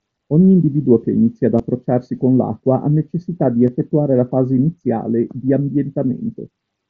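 Concealed Bluetooth headset packet loss occurs in this speech clip at 1.58 s, between "individuo che inizia ad" and "con l'acqua ha necessità", and again at 3.67 s, after "l'acqua ha necessità di". Voice packets from headset to phone went missing, and the receiver filled each gap with a repeat of the best-matching recent waveform. The first gap lasts 15 ms, consistent with two lost frames, and the second 7.5 ms, fitting a single frame. The single loss at 3.67 s is so brief that the patch is nearly hidden. The mSBC wideband link carrying the audio adds light grain.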